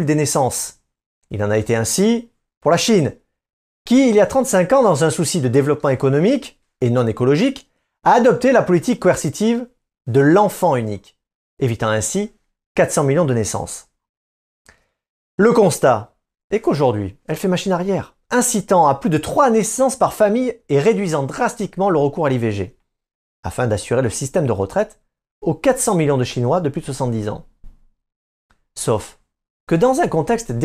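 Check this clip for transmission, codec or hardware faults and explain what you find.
No faults can be heard anywhere in the recording.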